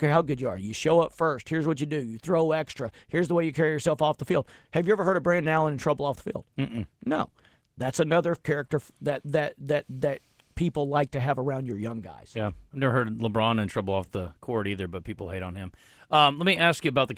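Opus voice compression runs the whole way through the speech, plainly audible: a hoarse, faintly robotic buzz in the voice, typical of a coarsely coded linear-prediction core. Unlike a simple low-pass, the top end is present, which fits hybrid mode at roughly 16 kbps.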